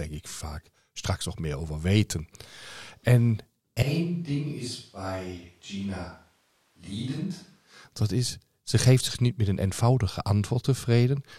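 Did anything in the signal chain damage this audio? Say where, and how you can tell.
Yes. A switch to a distant microphone runs from 3.83 s to 7.84 s, at the capture stage before any conversion. The speech abruptly turns roomy and hollow, loses its low end, and drops about 10 dB in level, with room noise sitting roughly 35 dB below the speech. At 7.84 s the close sound snaps back. The likely cause is that the close microphone's feed dropped out and a more distant pickup filled the gap.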